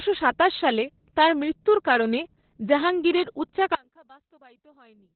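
A speech clip carrying heavy Opus voice compression from start to finish: the band stops at about 4.3 kHz, the narrowband limit, and the coarse excitation coding leaves the voice muffled, hoarse and faintly robotic, which fits the SILK coder running near 8 kbps. On a spectrogram the energy ends at a hard ceiling near 4.3 kHz with empty space above, and the harmonics look smeared and blotchy rather than cleanly striped.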